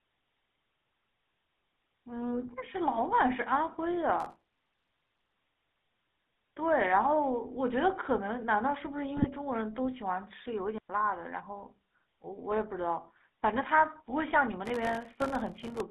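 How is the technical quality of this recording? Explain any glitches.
Poor. The recording carries coding damage throughout and has four distinct glitches.

GSM full-rate codec: For the full 16 seconds the speech sounds buzzy and gravelly, with a band of roughly 200 Hz to 3.6 kHz, which fits a 13 kbps GSM full-rate link. The codec rebuilds speech from a coarse vocal-tract model and a thinned pulse excitation. On a spectrogram nothing appears above about 3.6 kHz, and the harmonics look smeared and grainy.

Processor overload crackle: From 4.20 to 5.35 s and again from 14.66 to 15.80 s, a gritty tearing rides on the speech. The processor repeatedly failed to fill very short buffers of around a millisecond or two, and each miss left a hard-edged gap of silence. A waveform shows dense, tiny dropouts, and a spectrogram shows vertical broadband streaks.

GSM bit errors: At 9.17 to 9.27 s the speech briefly squawks and gargles. 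Corrupted bits, at an error rate of about 1.5%, reached the decoder across a few frames. The bad filter and gain values distorted the spectrum, which shows as blotchy, misshapen energy and a jumpy level on the waveform.

Digital wireless dropout: At 10.78 s the sound vanishes for 113 ms. The wireless receiver lost too much data and muted with a very short fade, with no noise burst on either side. On the waveform it is a flat, clean gap, and on a spectrogram a blank vertical slice.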